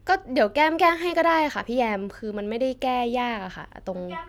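Nothing goes wrong anywhere in this speech recording; there's simply no technical fault to point to.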